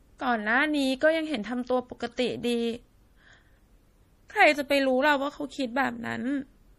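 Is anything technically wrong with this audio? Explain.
Yes. Throughout the speech there is plainly audible codec damage, likely from MP3 compression. Nothing is present above 15.1 kHz, where the encoder has cut the treble to save bits. Below that, weak frequency lines are dropped and restored from frame to frame, giving a watery, swirling texture with metallic chirps on s sounds and smeared consonant attacks. That degree of damage points to a low bitrate of around 40 kbps.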